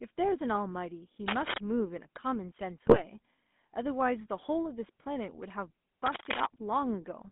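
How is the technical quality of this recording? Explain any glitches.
The technical quality is poor: the whole recording has been through a GSM full-rate phone codec, and it has three separate glitches on top of that.

GSM full-rate codec damage runs from start to finish and is plainly audible. The audio is confined to a phone band of roughly 200 Hz to 3.6 kHz, consistent with a 13 kbps GSM full-rate stream. The codec rebuilds speech from a vocal-tract filter excited by a sparse, regularly spaced pulse train, so the voice sounds buzzy and gravelly rather than just muffled. A plain band-limited line would sound thin but smooth; the grainy roughness is the sign of the codec itself.

Cable scratch noise occurs twice, from 1.28 to 1.58 s and from 6.04 to 6.46 s, both times about as loud as the speech. Each burst is most likely a worn cable, connector or control being moved, with the contact resistance changing rapidly and injecting dense, irregular crackle. 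It sounds like scratching or rustling laid over the voice while the speech carries on underneath. That is what distinguishes it from the bit errors, which damage the speech itself.

GSM bit errors hit between 2.83 and 3.02 s, and the sound points to a run of several corrupted frames. Flipped bits on a weak radio link corrupted the decoder's filter, pitch and gain values, so the spectrum warps and the level jumps from one frame to the next. The voice turns into squawks, pops and gargling. Unlike the cable scratches, nothing is added alongside the speech; the speech itself breaks up.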